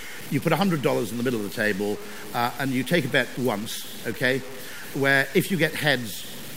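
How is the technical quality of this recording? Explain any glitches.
Not great: there's a grainy, gritty distortion riding on the speech the whole way through, roughly 20 dB down and tracking every syllable. That's likely low bit depth without dither, which fits truncation to about 6 bits.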